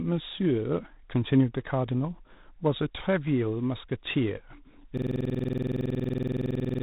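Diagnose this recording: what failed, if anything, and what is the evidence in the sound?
At the codec stage, the whole recording has G.726 ADPCM damage. Nothing passes above 3.8 kHz, and a harsh, rasping hiss rises and falls with the speech level. That texture fits 24 kbit/s. ADPCM codes each sample as a coarse difference from an adaptive prediction, so too few bits leave quantisation error that tracks the signal. Plain band-limiting or steady background noise would not make this level-dependent grit.

From 4.97 s to the end there is a system hang loop at the driver or buffer stage. One 46.44 ms piece of audio repeats exactly, about 40 times, making a stutter at 21.5 Hz. The length fits a 2048-sample ring buffer that the hardware kept replaying after the driver froze. A network dropout or a packet-loss concealer would vary, fade or fill with noise, but these repeats are identical and never recover.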